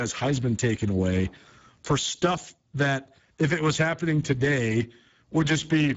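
Speech throughout, heard through the Speex codec at a low setting, fitting roughly 10 kbps. Its CELP excitation is starved, leaving a hoarse, noisy texture, with no metallic swirl as in transform codecs, and the upper band stops dead at 7.7 kHz.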